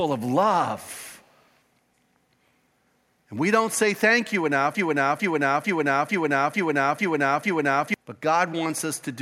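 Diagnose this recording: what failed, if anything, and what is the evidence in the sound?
Echo leak, 0.86 to 1.33 s: a very faint copy of the speech trails the original by about 354 ms. The likely cause is in call processing: a far-end loudspeaker's echo canceller let residual microphone pickup through, and it was sent back.

Broken-record loop, 4.75 to 7.94 s: a 0.45 s fragment repeats identically seven times back to back, and the speech that belonged in that span is lost. A stalled playback, encoder or stream buffer likely kept re-sending the last chunk it held.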